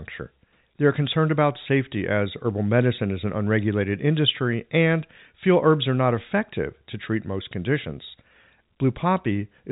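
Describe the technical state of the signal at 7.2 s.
At 7.2 s the audio is intact, with the speech passing through G.711 telephone coding that leaves nothing above about 3.8 kHz.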